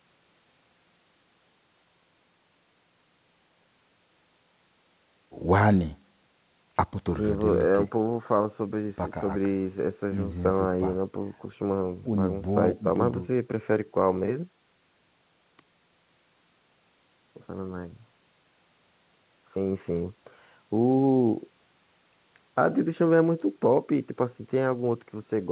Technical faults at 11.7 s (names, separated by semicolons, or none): none